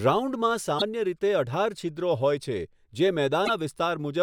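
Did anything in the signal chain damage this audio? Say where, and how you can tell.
Yes, at the codec stage. At 0.78 to 0.82 s and again at 3.45 to 3.50 s, the speech skips forward with a brief stretch of corrupted audio, about 40 ms and 52 ms long, or roughly two frames at MP3's 24 ms frame length. The likely cause is a broken MP3 bit reservoir. Frames were lost, so the following frames pulled borrowed data from the wrong bytes and decoded as garbage until the stream resynchronised.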